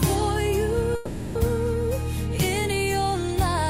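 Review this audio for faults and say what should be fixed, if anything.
From 0.95 to 1.37 s there is a call audio freeze. The last sound is stretched into a fading buzz for about 400 ms, then the audio resumes exactly where it stopped, so nothing is lost but everything after runs about 400 ms later. The likely cause is delayed packets draining the jitter buffer. Prevent it by improving network path stability and giving the jitter buffer enough adaptive depth to absorb such delay spikes.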